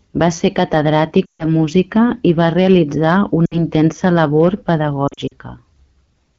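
Throughout the recording the signal is driven about 4 dB past what one stage can pass, so around one percent of samples have their peaks sliced flat. This hard clipping adds high harmonics that come through as a brittle crackle on the loudest speech peaks.

Radio errors corrupt AMR-WB speech frames three times, and the decoder fills each gap by repeating its last good pitch and vocal-tract settings at falling gain. From 1.25 to 1.47 s, just before "música i va realitzar", about 140 ms of speech is lost. The sound drops to near silence within two frames, and the voice returns thin.

From 3.46 to 3.63 s, between "música i va realitzar" and "intensa labor", about 60 ms of lost AMR speech frames cause a brief drop to near silence.

From 5.07 to 5.34 s, after "intensa labor", about 120 ms of losses are scattered across 240 ms, none longer than 40 ms. The result is a choppy, fluttering stretch rather than a single dropout.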